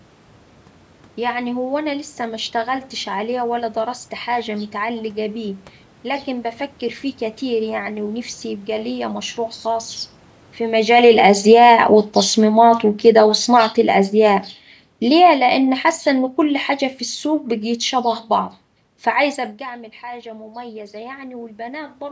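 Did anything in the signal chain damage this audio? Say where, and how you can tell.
Yes. At the call-processing stage, the automatic gain control misbehaves twice. The first is automatic gain falling. Just after "يبقا ليا مشروع خاص", the talker moves at the microphone around 10.5 s. The AGC reads that as overload and pulls its gain down by about 10 dB between 10.62 and 14.5 s. The speech and the room noise sink together until about "ليه لأن حاسة إن". Because the background drops with the voice, this is a gain stage acting, not the talker.

The second is automatic gain rising. Around 19.0 s the talker moves away, and after "بقيت شبه بعض فعايزة" the input falls by about 17 dB. From 19.6 to 22.03 s the AGC slowly raises its gain by about 4 dB, so voice and background noise swell together over a couple of seconds. That shared, gradual lift of the noise floor marks automatic gain compensation in the call chain, which only partly makes up for the quieter input.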